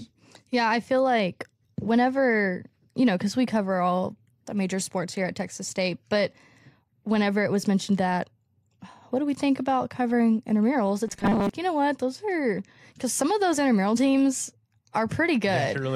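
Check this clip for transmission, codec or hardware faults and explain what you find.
One fault appears in the speech. From 11.07 to 11.49 s there is robotic sound from repeated short buffers: a metallic 200 Hz buzz, likely from most of each stretch being filled by repeating a 5 ms buffer. On a spectrogram it shows as rigid horizontal harmonics every 200 Hz, and the waveform repeats identical cycles.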